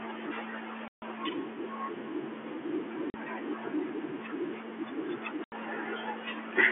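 Hard-edged holes cut into the speech three times: 0.88 to 1.02 s (140 ms), 3.10 to 3.14 s (40 ms) and 5.44 to 5.52 s (80 ms). This is packet loss filled with silence: the receiver inserted dead air where the packets went missing. Every gap is a multiple of 20 ms, which fits 20 ms packets on this G.711 telephone-band call.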